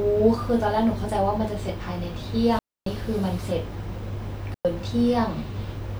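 The speech cuts out twice with digital wireless dropouts: 2.59 to 2.86 s, about 280 ms, then 4.54 to 4.65 s, about 110 ms. Each is a clean silent hole with no noise burst.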